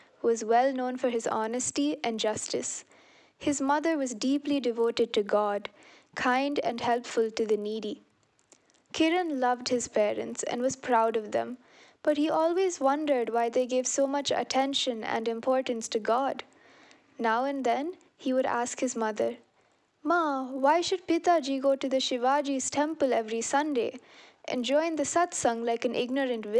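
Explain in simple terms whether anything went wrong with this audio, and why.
From 0.86 s to the end, the audio carries a low buzz caused by a resampler restarted on every block. The audio was converted in 20 ms chunks, each handled separately, so every seam leaves a small glitch, fifty per second.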